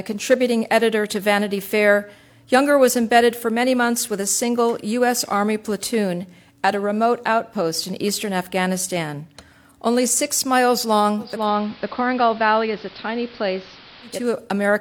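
A hybrid receiver lost its digital signal and performed a digital radio blending to analogue onto AM from 11.17 to 14.36 s, with a 350 ms cross-fade. The sound drops about 2 dB, and gains hiss roughly 20 dB down.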